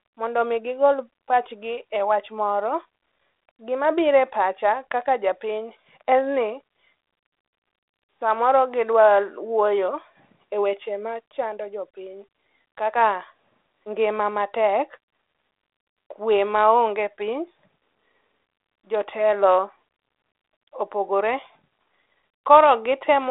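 The speech here shows no technical faults, carried over a G.726 ADPCM path at 32 kbit/s whose telephone band of roughly 300 Hz to 3.6 kHz and light coding texture are what that link normally produces.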